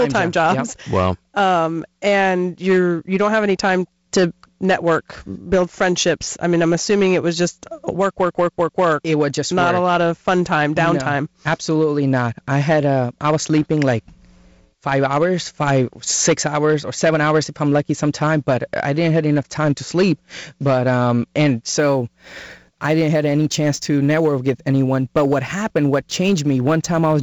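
Hard clipping runs through the whole speech clip. The level is pushed about 9 dB past what the chain can pass, so a few percent of samples hit the ceiling and are cut flat. Loud syllables crackle, with a harsh upper edge from the added harmonics.

From 21.78 s, right after "um and", sample clock jitter sets in and lasts to the end. The converter clock wanders by a few microseconds, so samples land slightly off time. A rough hiss, roughly 35 dB below the signal, rides the louder, brighter sounds and drops away in pauses. The telephone-band coding, with nothing above 7.7 kHz, keeps its light upper-band hiss throughout.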